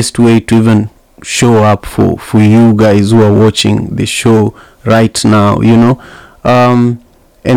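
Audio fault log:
Throughout, hard clipping: the speech reaches some stage about 8 dB hotter than it can pass, so roughly one sample in seven is cut flat at the ceiling. Those squared-off peaks throw harmonics high up the spectrum, giving a harsh fuzz on every loud syllable.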